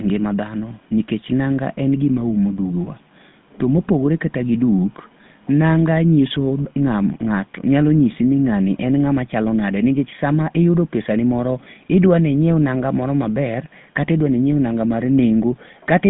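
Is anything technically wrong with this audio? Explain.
Yes. GSM full-rate codec damage runs throughout. The speech is rebuilt from a vocal-tract model and a sparse pulse excitation, which fits a 13 kbps GSM full-rate link. This gives a plainly audible buzzy, gravelly roughness within a narrow 150 Hz to 3.6 kHz line band, with nothing above 3.8 kHz.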